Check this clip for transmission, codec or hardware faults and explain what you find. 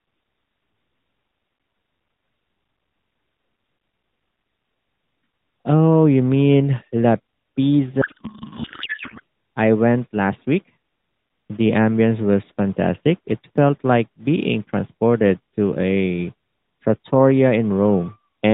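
One transmission fault is present, in narrowband AMR speech whose light coding sound fits roughly 12.2 kbps.

Codec payload misread, 8.02 to 9.20 s, just before "I went last". Octet-aligned AMR frames are unpacked as bandwidth-efficient, so the decoder reads shifted fields. The speech becomes garbled warbling noise.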